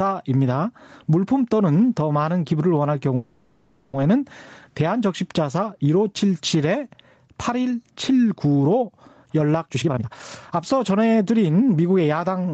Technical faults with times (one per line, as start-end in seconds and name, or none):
0.00-12.53 gain pumping
3.15-3.95 call audio freeze
9.67-12.01 jitter buffer speed-up